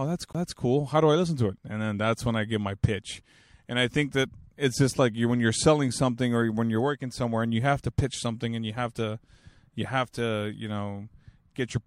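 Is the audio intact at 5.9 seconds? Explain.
Yes, at 5.9 seconds the speech plays through intact, with no dropout, click, distortion or other fault at that moment.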